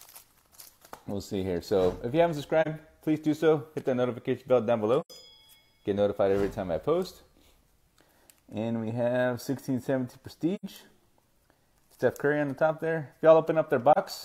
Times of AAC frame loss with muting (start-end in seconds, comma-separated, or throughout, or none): 2.61-2.67, 5.00-5.10, 10.55-10.65, 13.92-13.98